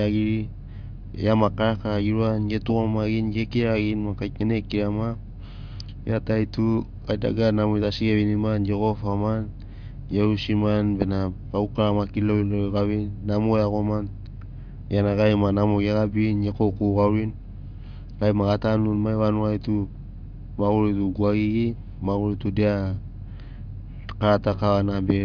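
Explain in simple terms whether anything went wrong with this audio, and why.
Nothing went wrong here; the speech comes across just as it should, with nothing to trip over anywhere along the way.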